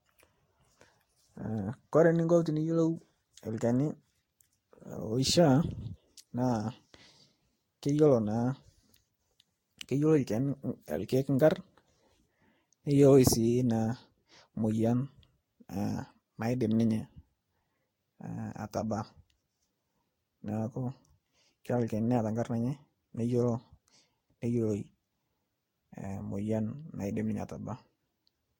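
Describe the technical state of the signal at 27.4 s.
At 27.4 s, as throughout, the speech shows generation loss, likely from repeated Vorbis re-encoding: swirly, hollow, smeared attacks; the spectrogram shows holes and nothing above 16.6 kHz.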